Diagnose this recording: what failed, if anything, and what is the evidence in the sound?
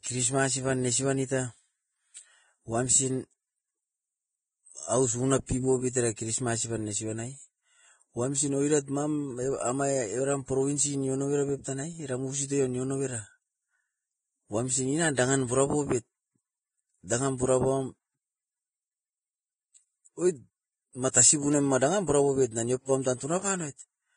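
The trouble sits at the codec stage. The whole speech clip is hissy and grainy, with nothing above 9.7 kHz. That's likely Vorbis compression pushed hard, which fits a bitrate around 19 kbps. The treble gets quantised so coarsely that its detail turns into noise.

Pre-echo shows up from the same codec at 5.46, 10.46, 17.07, 21.11 and 22.85 s. A short hiss of about 20 to 27 ms leads each sharp onset. The block's quantisation noise, sized for the loud attack, smears into the quiet just before it.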